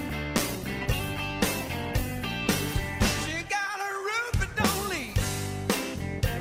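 From 0.39 s to 5.57 s, a call bitrate drop coarsens the audio. It turns rough and muffled, which fits 64 falling to 15 kbps.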